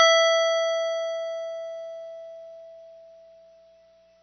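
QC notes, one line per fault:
Throughout, AAC compression: nothing above 6.2 kHz, leaving the music dull and smeared, with plainly audible warbling, fizzy texture on sustained tones. The likely cause is AAC-LC coding at a very low bitrate, consistent with roughly 24 kbps, which lowers the cut-off and thins the spectrum.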